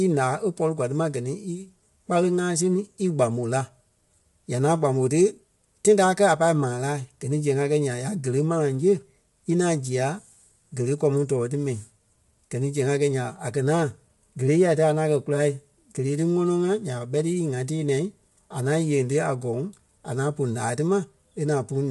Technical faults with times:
0.00-21.90 low-delay AAC compression

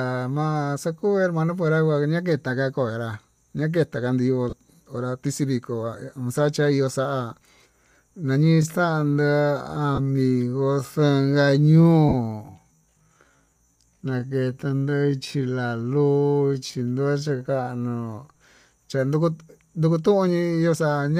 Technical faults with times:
4.50-4.53 lost LE Audio frames
8.41-18.39 time-stretched section
9.95-9.99 lost LE Audio frames
12.09-12.14 lost LE Audio frames
16.66-16.70 lost LE Audio frames

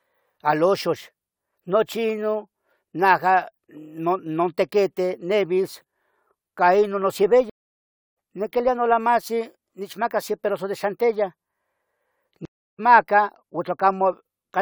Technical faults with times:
7.50-8.16 stream reconnect
12.45-12.80 stream reconnect

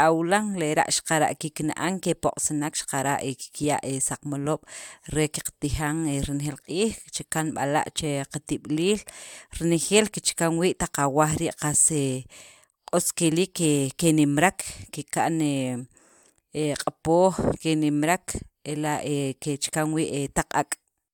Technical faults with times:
none

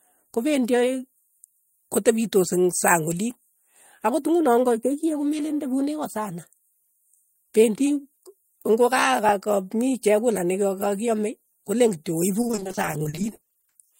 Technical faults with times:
12.41-13.81 repeated packet loss (robotic sound)

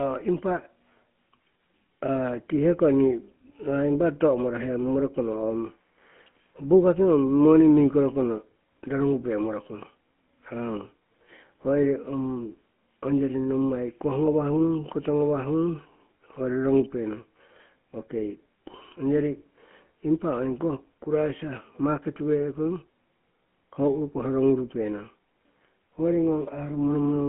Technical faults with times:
0.00-27.28 GSM full-rate codec

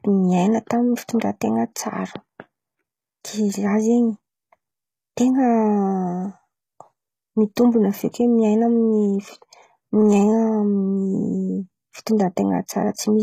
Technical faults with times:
0.00-13.22 HE-AAC compression
1.19-1.21 pre-echo

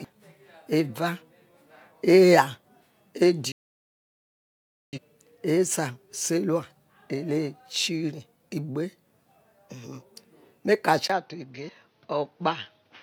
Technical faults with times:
3.52-4.99 digital broadcast dropout
11.08-13.03 input switched to a poorer device

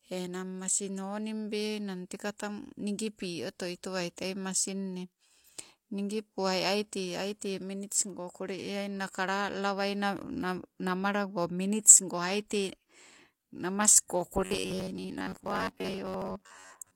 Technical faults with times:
4.16 pre-echo
14.08 pre-echo
14.42-16.95 robotic sound from repeated short buffers

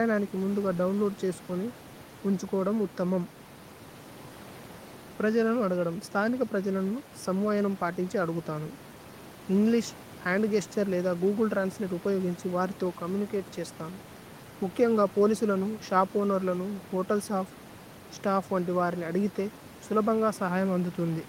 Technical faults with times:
none

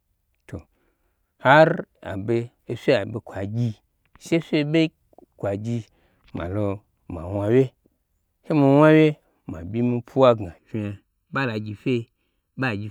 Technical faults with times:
10.58-12.91 channel delay (comb filtering)

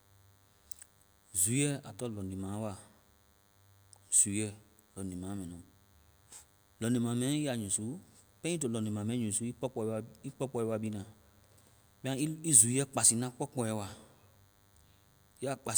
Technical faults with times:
0.00-15.77 DECT cordless phone buzz

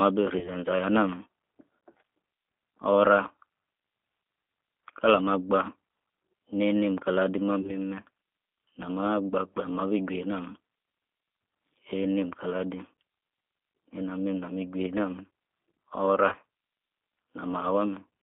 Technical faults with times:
0.00-18.22 G.729 codec
0.39-0.49 VoIP packet loss concealed by the speech codec
7.61-7.74 VoIP packet loss concealed by the speech codec
16.29-16.36 VoIP packet loss concealed by the speech codec

